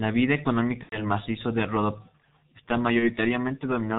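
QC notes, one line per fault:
throughout: G.723.1 codec. Heavy low-rate coding, consistent with about 6.3 kbit/s, removes everything above 4 kHz and tracks the voice slowly, leaving speech muffled and hoarse with smeared consonants.
0.83–1.01 s and 2.99–3.09 s: VoIP packet loss concealed by the speech codec. The decoder fills the gaps, about 90 ms before "macizo de" and 30 ms later, by repeating its last pitch and filter at falling gain. This produces a buzzy, fading smear, consistent with three lost 30 ms frames and then one.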